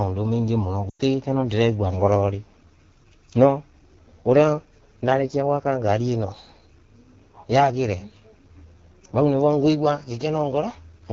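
The whole clip of speech carries the sound of the AMR wideband (HD Voice) codec. The band reaches about 7 kHz. Its top edge sounds hissy rather than detailed, because that strip is filled with shaped noise. The codec damage is plainly audible. Voiced sounds come out rough and raspy. That grain fits one of the two lowest AMR-WB rates, such as 8.85 kbit/s, where the pulse-driven vocal tract model has too few bits.

From 0.89 to 1.01 s, lost AMR speech frames cut in. The gap spans about 100 ms, and within about two frames the sound drops to near silence. That length fits a run of about five 20 ms frames that failed their checksum. The decoder carried the last good pitch and vocal tract settings forward, with falling gain. In wideband that fade is quick. As frames return, the speech comes back briefly weak or rough before it settles.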